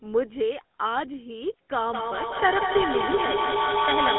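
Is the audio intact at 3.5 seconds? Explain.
No. At 3.5 s the sound carries two faults. The first is the GSM full-rate codec damage present across the whole clip. The coder rebuilds the signal from a vocal-tract model driven by sparse, evenly spaced pulses, which gives a plainly audible buzzy, gravelly grain that fits a 13 kbps full-rate coder. On a spectrogram the energy stops hard near 3.9 kHz, with the band concentrated between 200 Hz and 3.5 kHz and a coarse, smeared harmonic texture.

The second is feedback echo between two devices, running from 1.93 s to the end. A second device in the room replays the call, the first microphone picks that up again, and the echo canceller ignores it because it did not play it. Each sound returns roughly every fifth of a second, peaking about 2 dB above the direct signal, so the repeats stack up into a thin, ringing wash. On the waveform, copies at that spacing fill the gaps, and the spectrogram shows smeared, comb-like striping.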